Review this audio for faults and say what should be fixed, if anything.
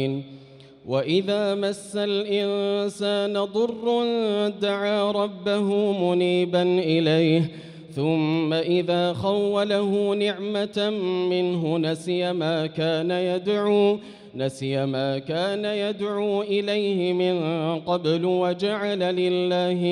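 Nothing in this audio needs to be fixed, as there are no faults to report.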